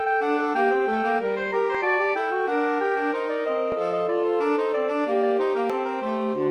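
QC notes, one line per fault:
1.75 s, 3.72 s, 5.70 s: audio missing between chunks. Short skips recur about every 2 s, each losing around 30 ms with the two sides butted together and no silence, likely a recorder dropping a sliver at each 2-second chunk boundary.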